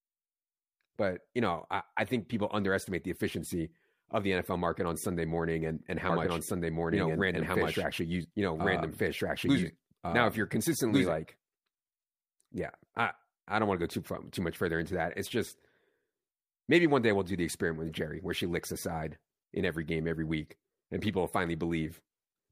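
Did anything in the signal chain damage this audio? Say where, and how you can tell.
Yes: a doubled audio track from 6.10 to 11.14 s, after "morning and and how", an equally loud copy about 1.5 s late, likely a second slower capture path. Spectrograms show repeated patterns offset, starting abruptly.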